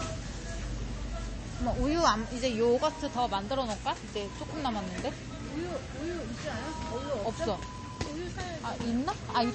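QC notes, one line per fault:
Throughout, low-bitrate audio saved at a high bitrate: nothing above 8.3 kHz and a smeared, swirly texture, likely an MP3 pass at something like 32 kbit/s later re-saved much higher. The bigger file can't bring back what that first encode threw away.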